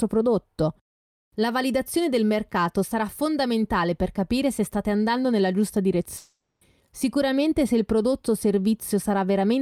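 Around 6.17 s the speech gives way to a smeared, buzzy continuation of the last sound that fades out and hangs on until about 6.63 s, close to half a second. The sound never drops to true silence. The likely cause is a long network dropout: nothing arrived for that stretch, so the receiver kept extending the final sound it had, and when the stream resumes roughly 440 ms of the original speech is simply gone.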